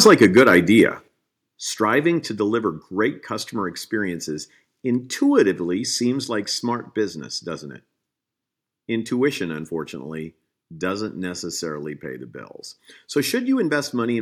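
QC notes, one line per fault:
0.05 to 0.82 s, microphone overload: the loudest syllables in this opening stretch carry a harsh, crackling edge with squared-off peaks. The signal is driven about 5 dB past full scale, so a few percent of samples sit flat at the converter's ceiling and the waveform tops are sliced off. Those abrupt flat segments add dense odd harmonics, which is the gritty sound. The likely cause is the microphone input gain being set too high.
0.07 s, 1.08 s and 2.16 s, microphone volume stepped down: the voice and the background noise drop together in three sudden steps, of about 2 dB, about 6 dB and about 2 dB, the last just before "to deliver great customer". Because speech and room tone fall by the same amount at once, this is a change to the input volume itself rather than a change in delivery. The likely cause is call software reacting to the clipping above by turning the device's input level down in discrete steps.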